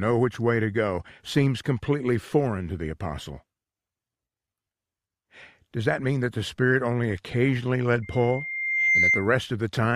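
A loudspeaker feedback squeal runs from 8.02 to 9.34 s: a microphone picks up its own loudspeaker, and the loop gain passes one at 2.1 kHz. That single tone swells over about a second into a piercing squeal, ending up somewhat louder than the sound itself.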